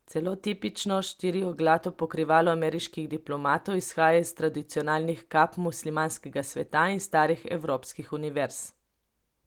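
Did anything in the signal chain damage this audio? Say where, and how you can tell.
No, nothing damaged this audio.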